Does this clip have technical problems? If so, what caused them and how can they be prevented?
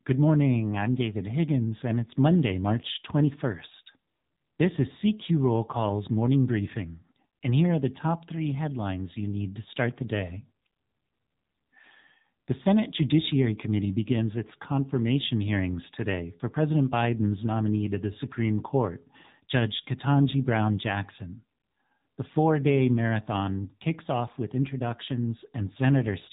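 Yes. Throughout the speech the voice sounds thin and boxed-in, with nothing above about 3.8 kHz, and it carries a plainly audible buzzy, synthetic edge. This is the AMR narrowband mobile codec (AMR-NB). It samples at 8 kHz and rebuilds the voice from a vocal-tract model excited by a few pulses per 5 ms subframe. The roughness points to one of its middle modes, around 7.4 kbps. To prevent it, capture or route the call through a wideband path or higher-bitrate codec.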